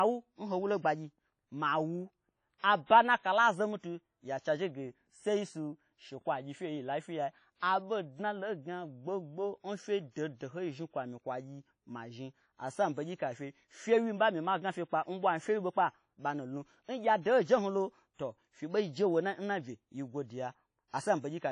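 The whole speech clip has a washy, ringing quality with hiss that breathes along, and nothing above about 10.1 kHz, likely WMA compression at a low bitrate, around 32 kbps. At 2.58, 10.11 and 20.88 s there's pre-echo: the codec smears its noise across a whole block, so roughly 55 ms of hiss arrives ahead of each sharp onset and softens it.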